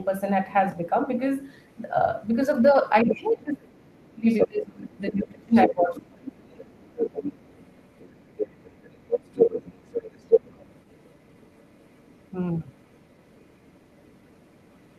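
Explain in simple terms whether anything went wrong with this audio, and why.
Yes, two things went wrong. First, the other side's voice is leaking through. A second voice can be heard at 1.44 to 2.21 s, 2.91 to 3.36 s, 4.3 to 4.48 s, 4.91 to 5.23 s, 5.55 to 6.03 s, 6.36 to 12.31 s and 12.66 to 14.98 s. It is faint at the start and end. Around 4.3 s it is as loud as the main talker. This is likely loudspeaker sound that the echo canceller failed to remove.

Second, there is speech suppressed in double talk. Between 2.72 and 6.8 s, both voices overlap. The main talker keeps dipping, sometimes very deeply, for about three seconds in total. The likely reason is that the echo canceller could not tell the two voices apart and turned both down.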